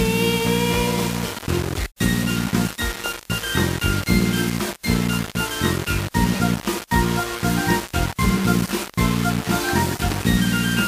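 The audio has gritty, grainy distortion throughout that tracks the sound and is only about 10 dB below it; the likely cause is low bit depth without dither, consistent with rounding to 4 bits. The waveform shows coarse staircase steps, and the spectrogram shows signal-following noise smeared across the band.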